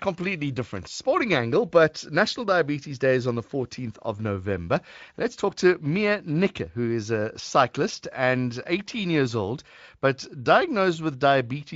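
No technical faults can be heard in this speech recording.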